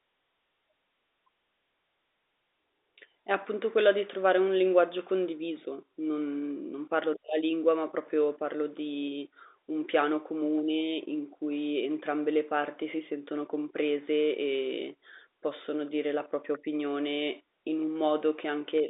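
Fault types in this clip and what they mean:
Nothing's gone wrong here: it's speech carried over an ordinary G.711 telephone line, so the sound stops at about 3.8 kHz, just as that format intends.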